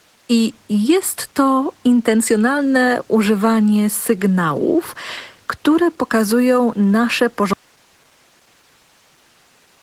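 Speech that has passed through Opus voice compression throughout, with the muffled, slightly hoarse texture of hybrid SILK/CELT coding at a rate that points to around 16 kbps. At 7.53 s the audio drops out to a faint residue of hiss, roughly 35 dB down, until the end, likely because the signal was lost while the downstream path stayed live.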